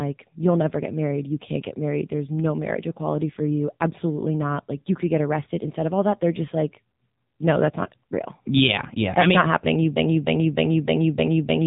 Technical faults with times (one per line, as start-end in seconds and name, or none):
0.00-11.67 AMR narrowband mobile codec